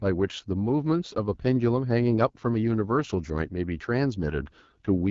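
From start to finish the speech carries AMR wideband (HD Voice) codec damage: a rough, raspy texture. This points to one of the lowest rates, around 8.85 kbit/s. Unlike narrowband AMR, the band reaches 7 kHz, with hissy noise filling above 6.4 kHz.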